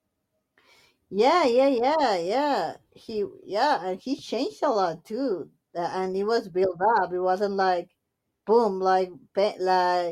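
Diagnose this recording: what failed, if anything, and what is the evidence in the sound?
Nothing failed in this speech recording. No stage of the chain, from wiring and conversion through to storage and playback, leaves any audible evidence of a fault.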